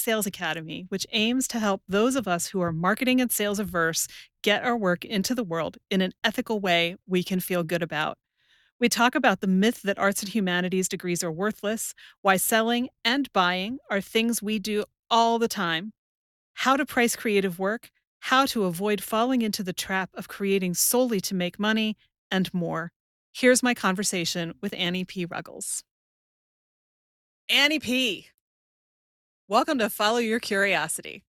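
No technical faults are audible.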